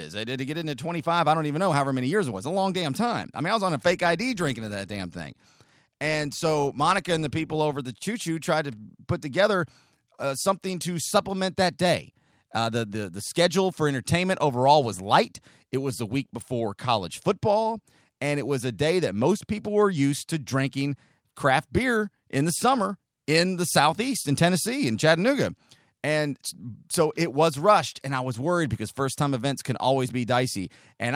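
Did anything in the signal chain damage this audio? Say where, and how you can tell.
No, nothing in the signal chain damaged this audio.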